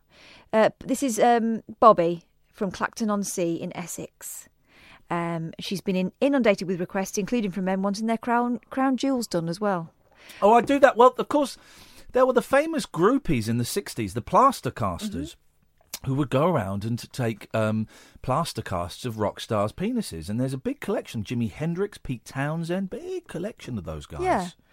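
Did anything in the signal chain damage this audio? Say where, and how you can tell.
Yes. The damage sits at the driver or buffer stage: a regular click recurs through the speech every 1.64 s, from 0.99 s to 23.97 s, about fifteen in all. That steady spacing points to clock drift buffer slips as the likely cause. Two independently clocked devices disagree by around 100 ppm, so the buffer between them creeps until a handful of samples is dropped or repeated. Network packet loss would give irregularly spaced gaps, not clicks at a fixed interval.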